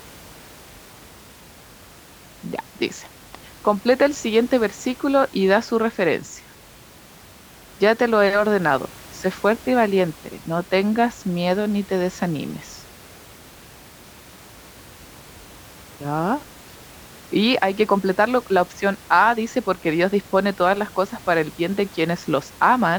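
No technical faults are present in the speech, and the only thing beneath it is the room's own background noise, sitting about 24 dB below the talker as part of the recording.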